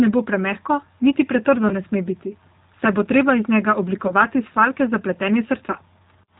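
From start to finish the speech carries plainly audible G.729 codec damage, consistent with an 8 kbit/s G.729A stream: a slightly rough, synthetic quality from frame-by-frame rebuilding with sparse pulses. A spectrogram shows an empty band above 4 kHz and smeared, blocky harmonics.

At 1.69 to 1.74 s, 4.07 to 4.13 s and 5.71 to 5.75 s there is VoIP packet loss concealed by the speech codec. Each gap fits about 20 ms of lost audio that the decoder filled by stretching its last pitch into a brief buzzy tone or coloured noise that fades. On a waveform the amplitude dips smoothly. A spectrogram shows flat, repeated harmonics before normal detail returns.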